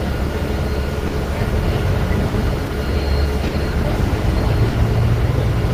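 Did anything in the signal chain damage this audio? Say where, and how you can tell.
Yes. Network stage: clock drift between sender and receiver. The sender's clock runs roughly 4 percent slow, so the jitter buffer keeps draining and timing hiccups recur.

Jitter buffer: short stalls from late packets at 1.07, 2.28, 3.47 and 4.68 s. Each holds the last sound about 50 ms, then resumes with nothing lost.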